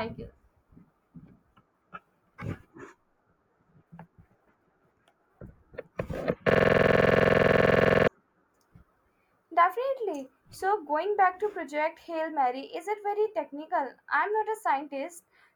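From 6.50 to 8.08 s the speech locks into a rough, rattling stutter, one 46 ms fragment repeating 34 times at 21.5 Hz. This is a system hang loop: the system froze while the audio hardware kept replaying the same ring buffer, which fits a 2048-sample buffer.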